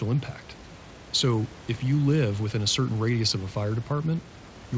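The recording contains no audible technical faults.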